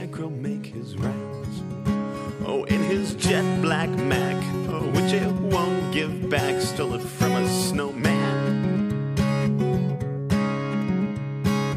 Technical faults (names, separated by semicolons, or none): none